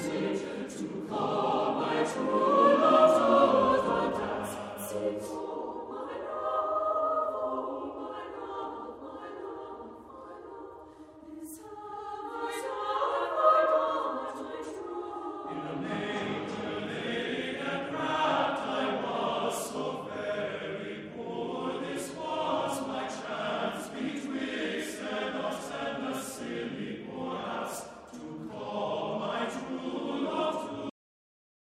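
At 30.90 s there's a cut-off end: the sound stops dead mid-event, with no decay at all, and the last three-quarters of a second to 31.65 s is plain digital silence. The final buffers were never written out before the stream closed.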